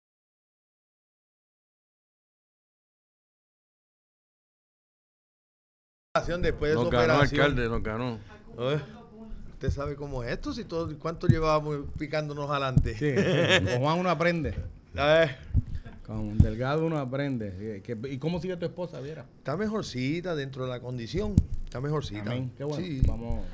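A resampler restarted on every block, converting 24 kHz to 16 kHz in 20 ms pieces, leaves errors at each edge, heard throughout as a 50 Hz buzz under the sound.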